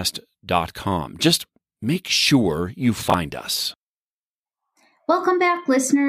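A brief garbled stutter at 3.10 s, just after "make sure you", is chunks out of order: one 20 ms chunk arrived late, playing after its successor.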